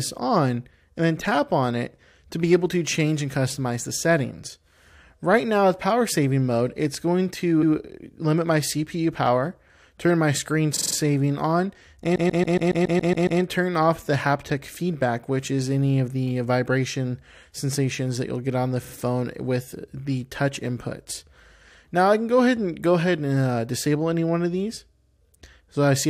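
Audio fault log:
7.62–7.73 s, 10.75–10.94 s, 12.15–13.40 s, 18.83–18.93 s, 24.96–25.15 s: repeated frames. Short compressed blocks replay as stutters: 116 ms once, 46 ms four times, 139 ms nine times, 46 ms twice, then 46 ms four times. Each repeat lengthens the audio.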